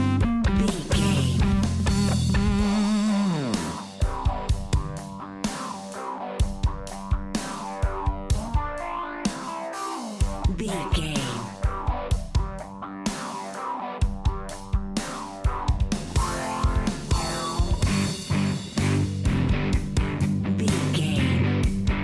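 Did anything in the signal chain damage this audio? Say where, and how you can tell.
No, nothing in the chain audibly damaged this signal; every stage from capture to playback leaves the sound intact, with no audible break, distortion, level fault or timing disturbance anywhere.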